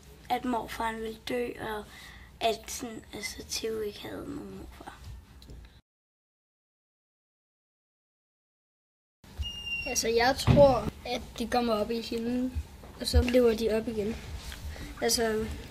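Nothing here goes wrong at any point, so there's no fault to trace through this clip.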